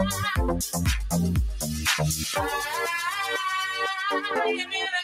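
A noise suppressor built for speech stays engaged for the whole clip, and it treats sustained tones, ambience and decay tails as noise to be removed. Attacks pass through largely intact, but anything held is pulled down by a few decibels, around 5 dB at most. The level therefore dips and recovers continually, giving the sound a pumping, fluttering quality, and the tails thin out instead of fading naturally.

Two loud pops sit on top of the sound, which carries on underneath each one. The first runs from 2.34 to 2.36 s and is a single sharp pop. The second spans 4.31 to 4.47 s and arrives as two pops in quick succession. Both peak roughly 10 dB above the surrounding audio. The likely cause is a sudden voltage step or pulse, such as a switch, a plug connection, static or a driver glitch, entering the signal chain and being shaped by the circuits after it into a brief, hard transient.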